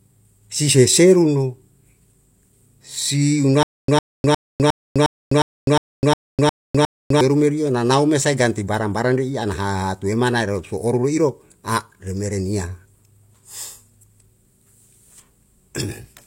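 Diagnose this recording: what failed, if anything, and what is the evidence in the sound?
Stutter with silent gaps runs from 3.63 to 7.21 s in this speech: a 105 ms fragment repeats ten times at a steady 358 ms period, each followed by 253 ms of dead digital silence, and the speech that belonged in that stretch is lost. The stage is likely playback or stream buffering. The player stalled, and on each retry it replayed the last fragment it held before running empty again.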